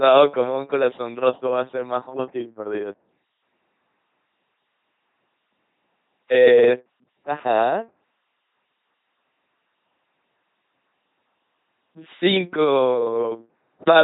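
From start to finish the speech has a buzzing, mechanical robot quality, with heavy damage throughout and nothing at all above 3.8 kHz. This is the LPC-10 vocoder at work. It rebuilds each moment as either a pulse-driven buzz or a noise-driven hiss passed through a small vocal tract filter, so all natural texture between those two states is lost. The coarse sound fits the 2.4 kbit/s military rate.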